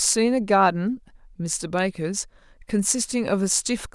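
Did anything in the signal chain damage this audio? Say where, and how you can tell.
Yes, there's a single sharp snap at 1.79 s sitting on top of the speech, fairly modest at around -25 dBFS and over almost instantly. That's an electrical switching spike, likely from a nearby switch or motor arcing and coupling into the analogue wiring.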